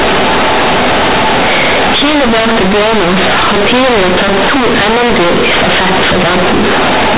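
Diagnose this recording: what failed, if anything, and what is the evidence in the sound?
Companded audio read as linear, throughout the speech: A-law bytes played as plain 8-bit samples at the format-conversion stage, making loud, buzzy distortion and heavy noise in pauses.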